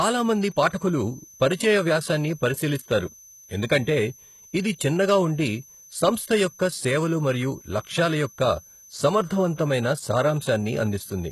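A switching supply whistle runs through the whole speech clip: a high tone wandering between 5.86 and 5.96 kHz, roughly 25 dB below the speech, from a power supply cycling in an audible range. A spectrogram shows a thin, nearly level line across the full length.

Throughout, the treble sounds synthetic and heavily damaged, with gritty, metallic s sounds whose upper harmonics fail to match the lower ones. This is likely HE-AAC compression at a low bitrate, about 16 kbps, rebuilding the treble from copied lower bands. A spectrogram shows blocky, repeated texture up to a sharp ceiling at 12.3 kHz.

From 0.59 to 0.65 s, hard clipping overdrives the signal by about 2 dB, so the peaks are cut flat and add high harmonics heard as a short crackle. The waveform shows squared-off peaks there, and the spectrogram shows a brief vertical smear of upper energy.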